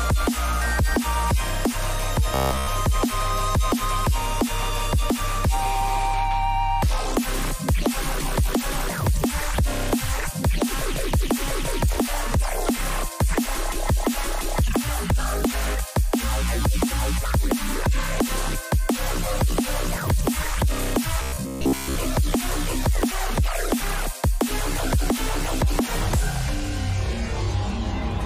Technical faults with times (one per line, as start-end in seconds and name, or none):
2.34-2.67 robotic sound from repeated short buffers
21.22-21.95 robotic sound from repeated short buffers